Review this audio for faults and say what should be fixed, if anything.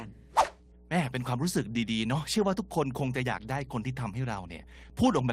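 Mains hum runs throughout as a steady 60 Hz tone at about -15 dB below the speech. Unlike rumble or wind, it holds one fixed pitch. Breaking the ground loop or moving away from the transformer prevents it.

Clock drift between sender and receiver is present for the whole clip. The sender's clock runs roughly 4% fast, so the jitter buffer keeps overfilling. Unlike packet loss, the timing slips all lean one way. Locking both ends to a common clock or resampling adaptively prevents it.

Repeated timing corrections run from 0.11 to 5.24 s. The receiver trims short pieces to keep up, giving small uneven hiccups and a slightly hurried 104% tempo rather than isolated dropouts. Smoother time-scale adjustment in the receiver would hide them.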